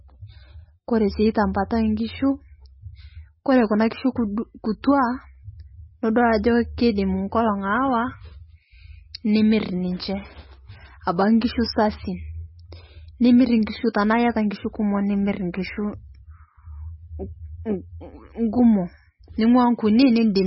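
Throughout, the speech sounds watery and swirly, with a hard ceiling near 5.6 kHz. This is heavy damage, likely MP3 compression at a very low bitrate. Unlike a simple low-pass filter, weak frequency lines flicker between frames and smear attacks.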